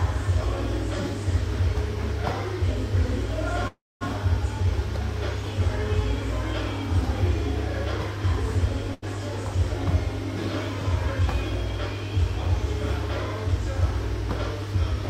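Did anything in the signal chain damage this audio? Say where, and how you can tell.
Yes. A call audio freeze runs from 3.67 to 4.03 s, at the network and jitter buffer stage. About 333 ms of sound is filled in: the last sound is stretched into a fading buzz or hiss that drops to silence for roughly 220 ms. Nothing is lost afterwards. The audio picks up exactly where it stopped, now 333 ms later than before, which points to packets likely being held up in transit until the buffer ran dry.

A burst of packet loss follows at 8.94 to 9.04 s, also on the network side. Here the receiver bridged an 82 ms hole by extending the preceding sound and letting it fade. When playback resumes it has moved on, with about 80 ms of the original audio gone. That skip forward with content missing distinguishes lost or too-late packets from the delay-only freeze earlier.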